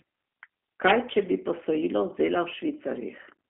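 G.729 codec damage runs throughout. The speech is rebuilt from filter and pulse models within 250 Hz to 3.4 kHz, sounding plainly rough and synthetic.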